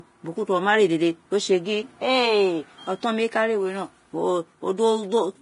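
From start to finish, the speech has most likely been through heavy Vorbis compression, squeezed hard enough that the damage fits a bitrate of around 30 kbps. The encoder has discarded everything above 10.6 kHz and quantised the remaining treble so coarsely that fine detail has turned into noise-like filler of similar energy. The result is a hissy, grainy upper range, with roughened tonal parts of the voice and smeared consonant onsets throughout.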